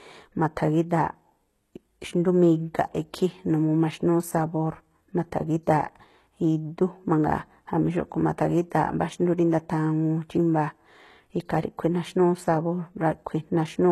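The encoding chain most likely ran this speech through HE-AAC compression at a very low bitrate, the sort of damage that fits a stream around 16 kbps, for the whole clip. Only the lower spectrum is carried faithfully; the treble is synthesised by copying lower bands upward under a coarse envelope, and the audio stops dead at 12.3 kHz. The codec damage is plainly audible: s sounds come out gritty and metallic, with a lisping edge where rebuilt harmonics fail to match.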